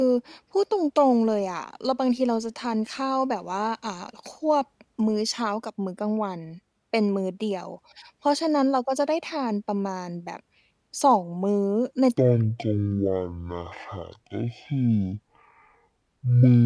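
From 12.18 s to the end at 16.66 s, the speech suddenly drops a full octave and slows to half speed, sounding deep and dragging. This is a wrong sample rate fault, consistent with 44.1 kHz audio played at about 22 kHz without conversion, so pitch and tempo fall together.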